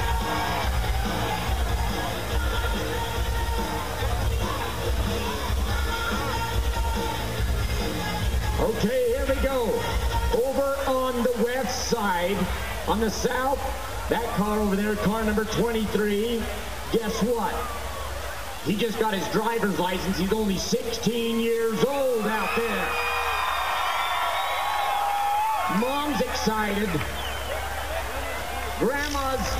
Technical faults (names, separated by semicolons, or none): low bit depth without dither